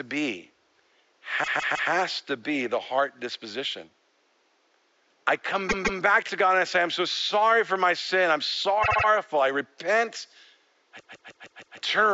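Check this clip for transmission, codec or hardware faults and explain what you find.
There are four bursts of repeated frames in this speech clip, with the room noise sitting about 43 dB under the speech. At 1.43–1.90 s (just before "to be the heart"), 5.68–6.00 s (after "I come"), 8.82–9.05 s (after "for my sin I'm") and 10.99–11.77 s, a block of compressed audio got sent or written more than once, so the decoder plays the same slice again. The blocks are about 157 ms long, except the one at 8.82 s, which is about 78 ms. You hear a stutter of two to five extra plays, and each burst adds its full length to the clip.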